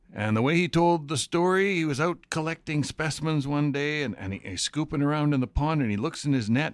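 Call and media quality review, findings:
No audible faults found in this speech recording; no symptoms to attribute to any component.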